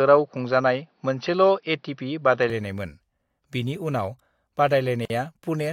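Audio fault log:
0.0 to 2.5 s, input switched to a poorer device: the speech opens dull and boxy, then clears to a fuller, brighter sound at 2.5 s with no silence at the switch. The opening stretch also sits about 5 dB apart in level and carries its own faint background noise, roughly 50 dB under the speech. The likely cause is the recording starting on a narrower-band input, such as a headset's call profile, before moving to a better microphone.
5.05 to 5.10 s, gap at a join of encoded pieces: the continuous speech drops out for about 48 ms, with edges smeared by the codec, and then resumes from exactly where it stopped. This happens where two separately encoded pieces meet and were butted together untrimmed, so the padding from the end of one piece and the start-up delay of the next both remain as silence. The spacing fits pieces about 6 s long.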